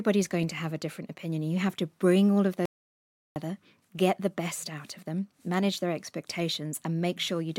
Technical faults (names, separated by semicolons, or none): audio dropout to silence